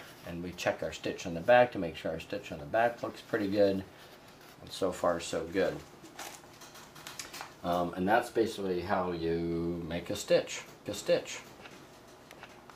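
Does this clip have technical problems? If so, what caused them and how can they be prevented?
Yes. A second path is likely capturing the same audio and mixing it back in late, producing a doubled audio track from 10.86 s to the end of the clip. A full-band copy at about the original level trails the sound by roughly 0.7 s, switching on abruptly with no decay or room colour, so every event is heard twice in quick succession. To prevent it, route the source through only one capture path and mute any monitoring or loopback input feeding the recording.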